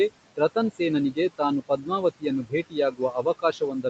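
Noise suppressor artifacts run throughout the clip. The suppressor treats the steady room noise, which sits about 15 dB below the speech, as something to remove. It pulls those bands down by about 21 dB frame by frame, so the background sinks in the gaps and resurfaces under the speech.

Speech cut by the noise suppressor occurs from 1.61 to 1.9 s. Here the suppressor mistakes some speech for noise and turns it down by up to about 10 dB, over roughly 150 ms in total. The affected sounds come across faint and partly swallowed.

Speech cut by the noise suppressor returns from 2.43 s to the end. This time the cut is deeper, reaching about 18 dB, so the quieter parts of the speech are pushed down along with the background and sound faint and swallowed.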